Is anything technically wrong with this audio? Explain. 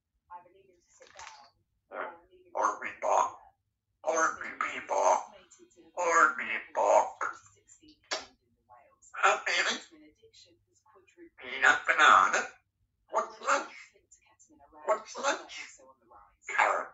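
Yes. Sound cut by the noise suppressor at 7.45–8.1 s, 8.28–9.06 s, 10.1–11.1 s and 13.93–14.67 s: misread as noise, steady sound sinks by about 17, 21, 19 and 14 dB.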